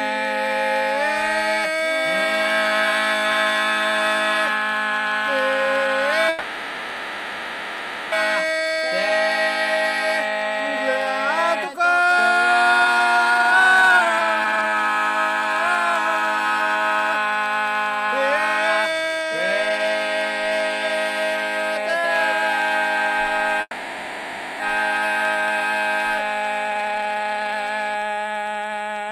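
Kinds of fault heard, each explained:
USB whine: A steady high whine at 8 kHz, strongest at its 16 kHz harmonic, about 30 dB below the sound, runs through the whole clip. Current drawn in 125-microsecond USB microframes is leaking into the audio through the power or ground.
block size mismatch (truncated): A constant buzz at 91.9 Hz sits under the whole clip. That is the block rate: one stage hands over longer blocks than the next reads, and each block's tail is dropped. The overall speed stays essentially unchanged here.
call audio freeze: The sound hangs and smears into a fading buzz or hiss from 6.29 to 8.14 s and from 23.61 to 24.62 s, the second briefly reaching silence. This is likely delayed packets emptying the jitter buffer. Playback resumes where it stopped, adding 1.84 s and 0.99 s of delay.
jitter buffer speed-up: The audio rushes at unchanged pitch from 12.81 to 14.83 s, at 184% speed, and from 26.68 to 28.78 s, at 147%. 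The receiver is trimming short pitch-period pieces to shed excess buffered delay, cutting roughly 1.5 s and 1 s.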